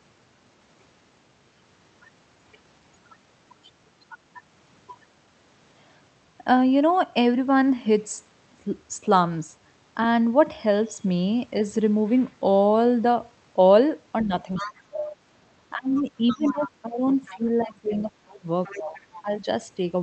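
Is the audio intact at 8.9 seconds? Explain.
Yes, the speech is intact at 8.9 s, with no fault at that moment.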